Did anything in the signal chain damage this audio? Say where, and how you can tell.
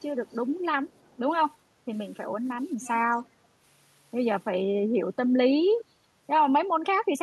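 Yes. The damage sits in call processing. Faint delayed copies of the speech surface at 0.27–0.35 s, 0.55–0.62 s, 0.86–1.17 s and 2.81–2.89 s. Each trails the original by 332 ms. The first three are very quiet, roughly 35 to 40 dB below the speech. The last is much plainer, about 20 dB down. This is an echo leak. The likely cause is a far end on loudspeaker whose echo canceller let part of the returned sound through.

The room sound also dips between 1.69 and 1.86 s, by about 6 dB, for roughly 150 ms. It then recovers. That is background gated by the echo canceller. While it judged the loudspeaker active, the canceller pulled the microphone level down. The ambience fell with it and came back once the canceller released.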